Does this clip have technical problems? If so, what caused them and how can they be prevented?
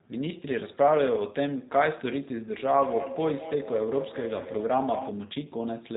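Yes. The G.729 codec shapes the whole clip. Nothing above 4 kHz survives, and the speech sounds rough and slightly synthetic. That fits an 8 kbit/s model-based coder rebuilding each frame from filter and pulse data. Use a wideband codec when bandwidth allows.

A feedback echo between two devices runs from 2.59 to 5.23 s. The sound returns about every fifth of a second, peaking about 9 dB below the speech. A second device in the room replays it, and the first microphone recaptures it. Mute or disconnect one device, or use headphones.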